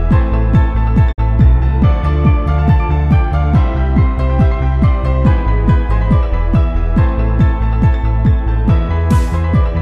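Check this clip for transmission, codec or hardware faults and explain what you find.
One transmission fault is audible: a digital broadcast dropout from 1.11 to 1.20 s. The receiver stopped getting valid frames and muted, fading the sound out over about 20 ms instead of cutting it hard. Roughly 48 ms of programme is missing, which fits two lost frames. The short fade into true silence, followed by material that resumes further along rather than where it stopped, separates this from a simple click or a concealed gap.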